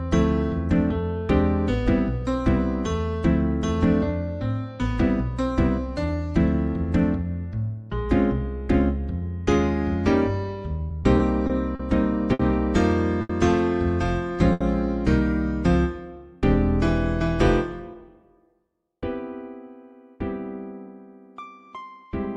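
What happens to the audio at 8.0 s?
Nothing goes wrong at 8.0 s; the audio plays through that moment intact, with no dropout, click or other fault.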